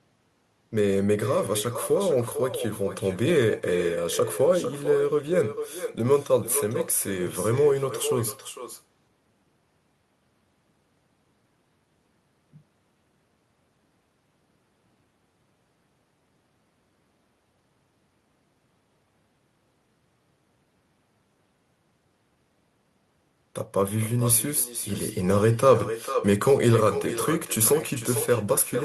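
Echo with no canceller runs through the whole speech clip: the far end's loudspeaker feeds its microphone and nothing removes it, so every phrase returns roughly half a second later as a thinner copy about 10 dB below the talker.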